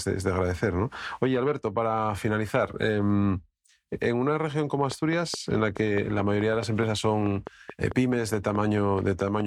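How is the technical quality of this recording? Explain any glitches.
The recording carries one clear glitch. A train of clicks runs from 4.92 to 9.41 s, starting right after "en una región como". About twenty similar pulses arrive at a steady 4.7 per second, likely from interference or a faulty connection or power supply, and peak about 10 dB above the speech as regular ticking.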